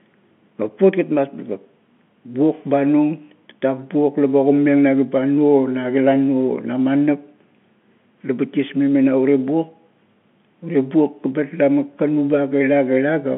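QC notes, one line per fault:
Nothing stood out on listening beyond the narrow telephone band of the G.711 line, which carries the speech as a phone call would.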